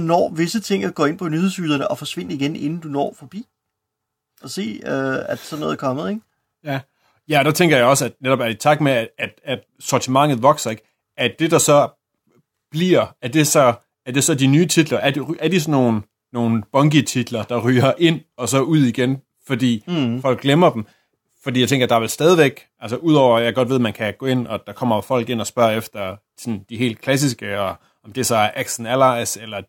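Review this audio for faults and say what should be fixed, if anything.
Nothing in the signal needs fixing, as no technical fault can be heard anywhere in the recording.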